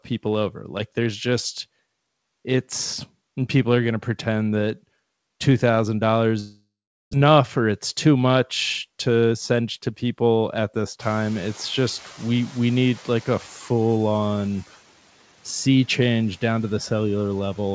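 From 6.40 to 7.15 s the speech gives way to a fading buzz, then about 0.4 s of silence, likely a long network dropout losing about 0.6 s of audio; the spectrogram shows a smeared, decaying band, then a blank gap.

From 9.10 to 10.04 s a jitter buffer speed-up trims about 70 ms of pitch periods, so speech runs at 108% speed with unchanged pitch; the waveform looks subtly compressed.

At about 11 s the room noise jumps by about 23 dB. The noise suppressor catches up from 10.99 to 13.48 s, with the broadband haze on the spectrogram thinning by about 5 dB over 2.49 s.

Throughout, the spectrogram is empty above 8 kHz, which fits G.722 at 64 kbps.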